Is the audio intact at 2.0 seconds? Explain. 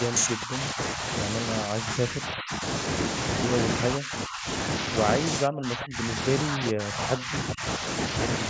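No. From 1.65 to 2.63 s the speech dips by roughly 10 dB, which is likely speech suppressed in double talk: an echo canceller that could not separate this side's talker from the loudspeaker echo while both played, and turned both down.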